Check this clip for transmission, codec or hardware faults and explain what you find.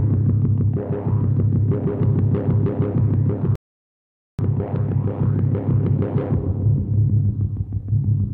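One fault is present: a rebuffering stall. At 3.55 s the audio drops to silence. It resumes at 4.39 s, picking up exactly where it stopped. The player had used up its downloaded audio and had to wait for more data to arrive. No material is skipped or repeated. Instead, about 0.83 s of dead air is inserted, so the clip runs that much longer than the original sound.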